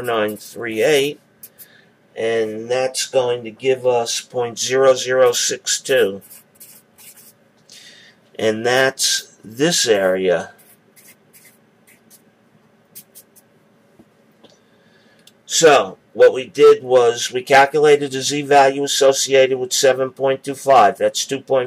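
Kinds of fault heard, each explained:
No faults can be heard anywhere in the recording: the level, continuity and frequency content of the signal stay steady and intact throughout.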